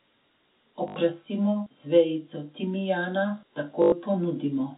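At 0.88 to 0.96 s there's packet loss with the last packet repeated: 80 ms went missing, which fits four 20 ms packets, and again after "z vejico timijana" from 3.82 to 3.92 s for 100 ms. Each gap becomes a 50 Hz robotic stutter.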